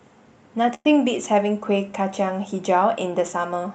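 At 0.74 s packets were likely held up and the jitter buffer ran dry, causing a call audio freeze. The last sound stretches into a fading buzz until 0.86 s, ending in a brief silence. Then the speech resumes intact, about 107 ms later than before.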